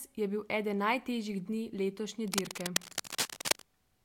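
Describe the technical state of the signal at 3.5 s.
At 3.5 s the speech is under cable scratch noise, running from 2.27 to 3.65 s, just after "eden najtežjih dni letošnje". The likely cause is a worn cable or connector whose contact resistance flickers as it moves, adding ragged scratching roughly as loud as the speech. A spectrogram shows dense, irregular broadband streaks; the waveform shows jagged bursts.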